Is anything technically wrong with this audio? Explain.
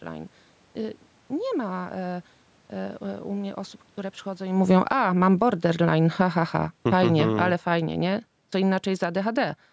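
Yes. Automatic gain falling, from 4.47 s to 9.58 s, right after "mnie osób które przychodzą": the gain control judged the input too loud, or its background noise too strong for its starting gain, and pulled its gain down by about 12 dB. The speech and the room noise sink together over those five seconds.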